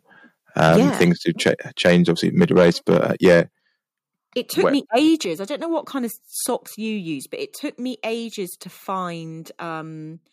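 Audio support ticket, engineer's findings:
Microphone overload, 0.59–1.51 s, 1.84–2.11 s, 2.40–3.41 s. Mic input gain likely set too high, so speech peaks run about 7 to 9 dB past converter full scale and their tops are sheared flat. Heard as a harsh, crackly edge on the loudest syllables, roughly 2 to 4 percent of samples flattened, worst in the third stretch.

Microphone volume stepped down, 0.76 s (about 4 dB), 3.42 s (about 8 dB), 5.25 s (about 6 dB). Call software's input-level control likely reacting to the overload and cutting device gain in single jumps. Speech and background drop abruptly together. The 3.42 s cut lands right after the longest clipped stretch ends. The 0.76 s cut comes mid-overload, and clipping continues after it.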